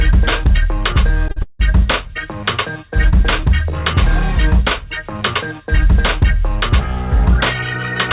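Audio carried over a call link, with nothing above 4 kHz, which fits narrowband G.711 A-law at 64 kbps. A short stall from a late packet occurs at 1.31 to 1.38 s. The jitter buffer ran dry, and the receiver held the last sound for about 50 ms before resuming at the same point. Nothing is lost, but the timeline shifts 50 ms later. A call audio freeze follows at 1.42 to 1.61 s. The last sound continues briefly, then drops into roughly 120 ms of silence before the audio picks up where it left off. This inserts a 170 ms gap, with nothing missing, most likely because packets were held up in transit and the jitter buffer emptied.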